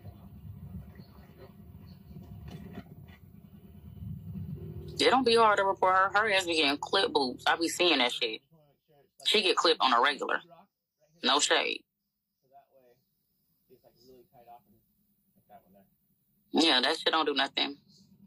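No technical faults can be heard anywhere in this audio.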